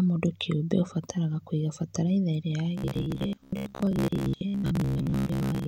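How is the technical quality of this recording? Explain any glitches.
The recording has one clear glitch in its second half. From 2.78 s to 5.67 s the speech takes on a robotic sound from repeated short buffers: a rigid, metallic buzz at about 66.7 Hz that still loosely tracks the words. The likely cause is audio arriving too slowly, so playback fills the gaps by looping the most recent chunk, which fits a buffer of roughly 15 ms. About half of the signal is being replaced by repeats, and that periodic looping imposes the fixed buzz pitch.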